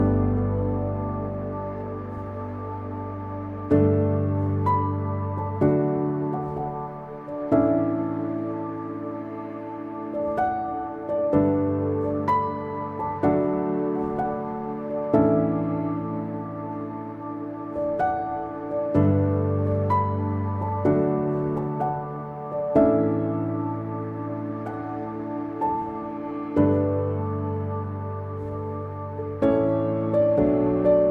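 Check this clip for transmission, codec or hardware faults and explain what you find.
No transmission or hardware faults are audible here.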